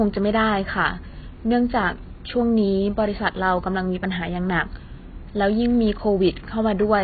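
Heavy AAC compression, likely AAC-LC at a very low bitrate consistent with about 16 kbps, runs from start to finish. With so few bits, the encoder cuts the bandwidth hard and starves the spectrum of detail. Nothing is heard above 4.7 kHz, so the speech sounds dull and muffled. Sibilants and sustained sounds smear into a warbling, fizzy texture where bands have been thinned out or filled with substitute noise.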